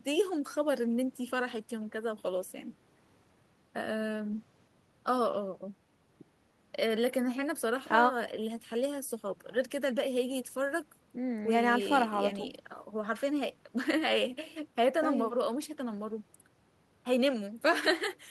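No technical faults can be heard anywhere in the speech. Nothing in the recording points to a problem with how it was captured or carried.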